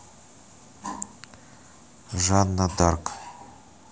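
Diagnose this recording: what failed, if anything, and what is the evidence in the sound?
Three skips break the speech at 0.62 s, 2.0 s and 2.8 s, each an abrupt jump where the sound skips forward rather than pausing. The first skip is the longest, roughly 40 ms, and the later two are about half that. The stage is the driver or buffer: these are likely dropped buffers (overrun), where capture samples were overwritten before the software read them, so the remaining audio is spliced end to end with no gap.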